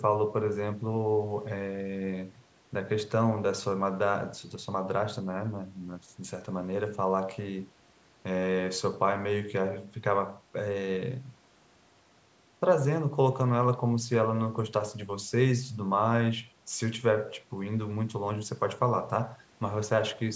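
Nothing's actually wrong with this speech recording: it has simply gone through a call's microphone processing, so the lowest bass is trimmed away and nothing sits above 8 kHz, which is just how that path normally sounds.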